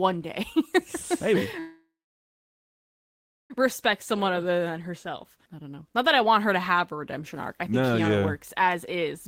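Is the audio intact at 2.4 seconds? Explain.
No. From 1.59 to 3.52 s there is a call audio freeze, likely from packets stalling in transit and draining the jitter buffer. The last sound is stretched into a brief fading buzz or hiss, then about 1.6 s of silence, before the audio resumes where it stopped, nothing lost but now running about 1.9 s late.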